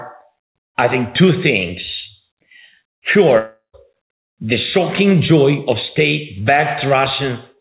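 At 3.38 s the audio breaks up, and it recovers at 3.75 s. The last sound before the gap is stretched into a buzz that fades out over about 350 ms. Near the end of that span there is about 130 ms of plain silence. When the audio returns, roughly 360 ms is missing and does not come back. This is most likely a long network dropout, with the receiver concealing the loss before giving up. Through all of this, the call path's G.711 coding keeps everything below 4 kHz.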